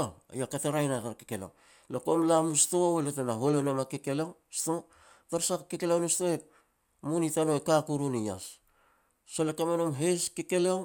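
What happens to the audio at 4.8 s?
Nothing goes wrong at 4.8 s; the speech there plays through intact, with no dropout, click or other fault.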